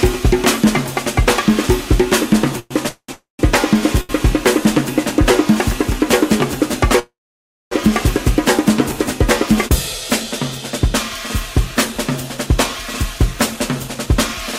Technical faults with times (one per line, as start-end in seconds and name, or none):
2.59-3.41 call audio freeze
4.01-4.11 short stall from a late packet
6.99-7.73 call audio freeze
12.37-14.14 jitter buffer speed-up